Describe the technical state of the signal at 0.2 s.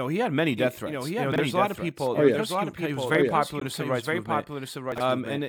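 At 0.2 s the speech is likely being mixed in twice, a second full-band copy arriving through a slower path, a doubled audio track running throughout. That copy trails by about a second at roughly 5 dB lower, dry and without room colour, so phrases overlap their own repeats.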